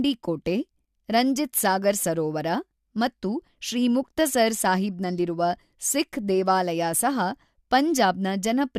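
No dropouts, glitches, distortion or other technical faults can be heard anywhere in the recording.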